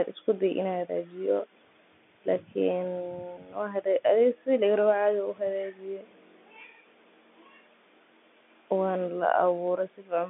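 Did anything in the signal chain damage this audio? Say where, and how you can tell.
No, nothing in the chain damaged this speech; what you hear is just ordinary G.711 telephone coding doing its job, which caps the sound at about 3.8 kHz and leaves the line band of roughly 200 Hz to 3.5 kHz carrying the speech, as any fixed-line call would.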